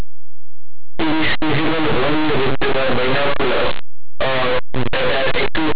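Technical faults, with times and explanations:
Throughout: linear audio read as companded. Linear 8-bit speech samples are expanded as mu-law codes, so values just on one side of zero become the largest outputs, giving harsh distortion.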